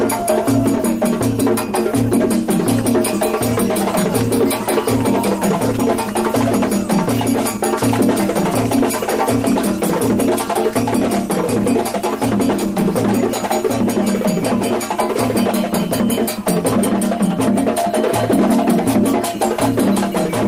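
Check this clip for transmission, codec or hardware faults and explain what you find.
Nothing turned up here that points to a problem in transmission, coding or the hardware, so there's nothing to flag.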